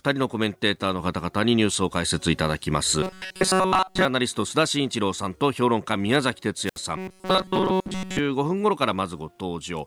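From 3.03 to 4.05 s the speech becomes a rigid, metallic buzz pitched at 188 Hz, with essentially the whole stretch made of repeats. This is robotic sound from repeated short buffers. The likely cause is audio arriving too seldom, so the software loops a fragment of about 5.3 ms instead of the real signal. On a spectrogram this shows as evenly spaced harmonic lines at 188 Hz multiples. The waveform shows an identical short cycle tiled over and over.

At 6.64 to 6.80 s comes a wireless microphone squelch dropout. The radio link fades, a brief burst of hiss rises, and then the receiver mutes the output for about 68 ms before the sound returns. A spectrogram shows a smear of broadband noise followed by a blank vertical band. The waveform shows fuzz and then a flat line.

From 6.98 to 8.19 s the same 188 Hz robotic buzz returns. This time most of the stretch, not all of it, is repeated fragments, so some real speech movement still breaks through the rigid tone. 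On a spectrogram the harmonic striping is interrupted in places by ordinary speech patterns.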